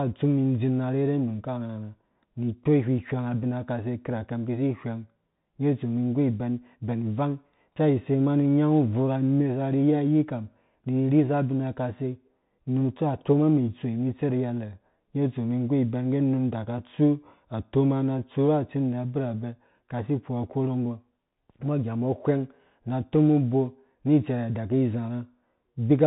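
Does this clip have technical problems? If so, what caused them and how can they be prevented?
Yes. A Bluetooth CVSD headset codec runs through the whole speech clip. Nothing above about 3.8 kHz survives, so the audio sounds boxed-in and telephone-like. The codec sends only one bit per step, telling the decoder to move up or down, and the step size adjusts as it goes. Loud, fast-changing sounds outpace it and distort, s sounds turn scratchy, and a grainy hiss sits beneath the speech, all plainly audible here, which fits a 64 kbps stream. To prevent this, record through a wired microphone or a headset using a wideband codec such as mSBC or LC3 rather than the narrowband hands-free mode.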